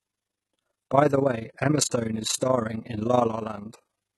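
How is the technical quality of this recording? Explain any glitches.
Poor: two faults run through the whole speech recording.

HE-AAC compression, most likely: a low-rate codec has coded only the lower spectrum and synthesised the treble by copying bands upward. The s sounds turn gritty and metallic, and the damage is heavy enough to suggest a stream of around 16 kbps.

Overlap-add ripple: the processing rebuilt the audio from windowed frames whose overlap does not sum to a steady gain, so the level swings by about 11 dB around 30 times a second. That gives the speech a rough flutter from start to finish.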